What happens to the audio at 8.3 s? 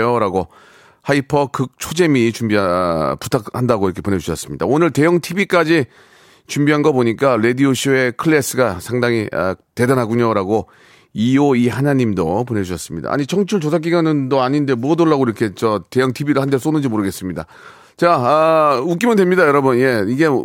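Nothing goes wrong at 8.3 s; the speech runs through that moment intact, with no dropout, click or distortion.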